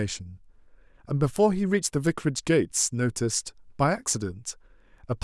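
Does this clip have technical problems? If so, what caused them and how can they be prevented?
Yes. A single flipped bit in memory or on a digital link produced a bit error spike at 1.36 s and again at 2.07 s. Each sample value jumps abruptly and snaps straight back, giving a sharp broadband tick unrelated to the speech, peaking at about -15 dBFS and about -21 dBFS respectively. Error-checked links, ECC memory and sound cabling and clocking prevent such flips.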